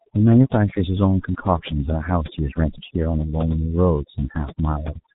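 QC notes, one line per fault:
throughout, overdone noise removal: The background drops and breaks up into twinkling specks. A noise reducer set far too aggressively is pulling individual frequency bands down or out entirely whenever their level sits close to its noise estimate. The quieter components of the speech fall into that range and are removed with the hiss, leaving isolated bands that flicker in and out.
throughout, G.723.1 codec: The speech is muffled and hoarse, consonants smear together, and nothing is heard above 3.8 kHz. This is heavy G.723.1 coding, an early internet-telephony codec working in 30 ms frames. The coarse, slowly updated model of the speech fits a bitrate of roughly 6 kbit/s. It cannot follow fast changes such as consonant onsets, so they blur, and the upper band is lost.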